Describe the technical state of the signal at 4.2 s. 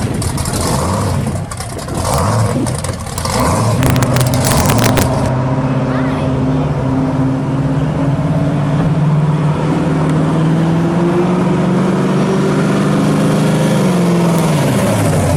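At 4.2 s the signal sits inside a stretch of integer overflow running from 3.83 to 5.02 s. The level was pushed about 2 dB past the largest value the integer format can hold, and rather than being limited, each peak that exceeded the ceiling wrapped around to the opposite extreme of the range. Every such peak flips full-scale in an instant, so loud moments in this span break into violent, hard cracks, far sharper than ordinary clipping.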